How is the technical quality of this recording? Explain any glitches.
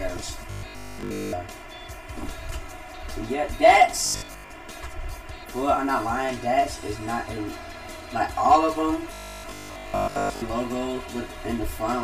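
The recording has two clear technical problems. A phasey colouring runs through the whole clip, and the sound breaks into a mechanical buzz three times.

Channel delay (comb filtering) lasts from start to end. One channel arrives about 3 ms late, and the two channels are summed. Shared content cancels at evenly spaced frequencies, with the first notch near 150 Hz. The result is hollow.

Robotic sound from repeated short buffers appears at 0.51–1.35 s, 4.06–4.52 s and 9.14–10.42 s. A fixed 50 Hz buzz is imposed. The likely cause is new audio arriving too seldom, so a 20 ms slice repeats. Most of the real audio is skipped.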